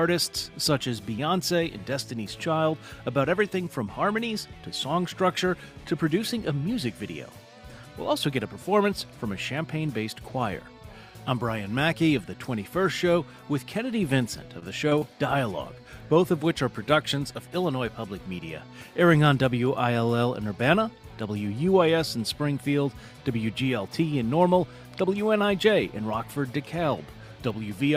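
Three bursts of short concealed packet loss fall close together. Around 20 ms of audio each time failed to reach the decoder, and the receiver bridged the gap by extrapolating the preceding sound before crossfading back. The first, at 14.59 to 14.64 s, leaves a smear about 22 ms long; the second, at 14.90 to 14.93 s, is a brief smear of roughly 13 ms; the third, at 14.99 to 15.03 s, produces a wobble of about 25 ms.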